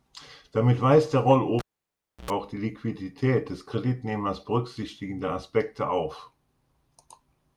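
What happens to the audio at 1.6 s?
At 1.59 s a live cable is pulled and plugged in again, lasting until 2.31 s. A pop cuts the speech to near silence for about 0.67 s, then a 96 ms burst of 60 Hz mains buzz comes through the partly seated plug before a second pop restores the signal.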